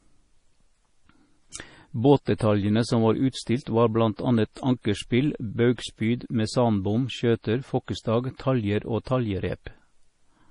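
The whole clip is heavily damaged by what's likely MP3 compression: the speech sounds watery and swirly, nothing survives above 10.5 kHz, and s sounds chirp metallically as weak frequency lines flicker on and off, which fits a starved bitrate of roughly 32 kbps.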